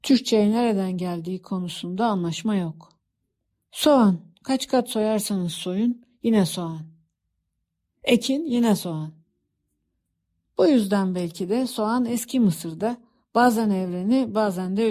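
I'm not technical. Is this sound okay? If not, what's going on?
Yes, it's fine: there's nothing technically wrong to point out in this recording, so you can relax about it.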